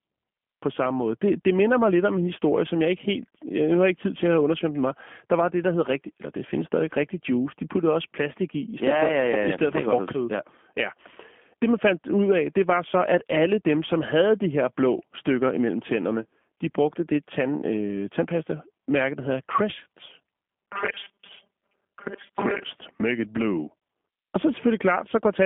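Speech throughout carries G.729 codec damage: a line band of 200 Hz to 3.4 kHz, nothing above 3.6 kHz, and a rough, synthetic texture that fits 8 kbit/s G.729A coding. From 20.49 to 22.63 s the sound turns into a robotic 200 Hz buzz, likely from repeated short buffers, with about half the audio replaced by 5 ms repeats.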